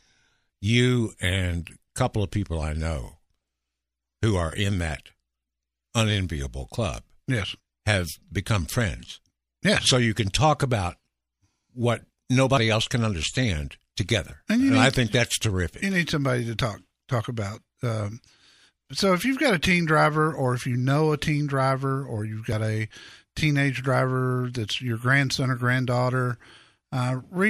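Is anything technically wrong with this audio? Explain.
Yes. Short skips at 2.62 s after "a couple of people", 17.55 s after "somebody to talk talk", and 22.52 s between "teen driver or you've" and "a teenage driver that's" are audio missing between chunks, likely a few tens of milliseconds dropped at 5-second chunk boundaries.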